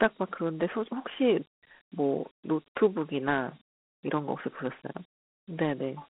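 From start to finish, the speech is squeezed into a narrow telephone band, 200 Hz to 3.4 kHz with nothing above 3.8 kHz, and a gritty hiss clings to every syllable. This is Dialogic VOX ADPCM: coarse 4-bit steps chasing the waveform, consistent with a 32 kbps stream.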